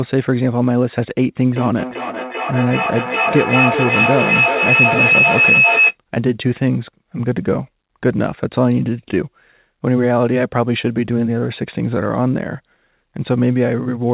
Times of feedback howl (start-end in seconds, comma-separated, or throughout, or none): 1.55-5.97